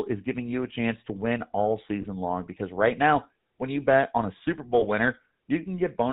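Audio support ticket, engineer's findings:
Whole clip: GSM full-rate codec, plainly audible. Buzzy, gravelly speech, nothing above 4 kHz. Pulse-excited vocal-tract model, consistent with a 13 kbps full-rate stream.

2.02–2.05 s (after "chance to win all", before "long because right now") and 4.80–4.85 s: lost GSM frames. Short metallic ring from the last good frame replaying, each roughly one 20 ms frame's worth.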